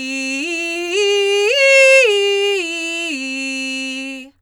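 Nothing in this bit of music trips the ear as a technical problem; it just rolls along the way it should.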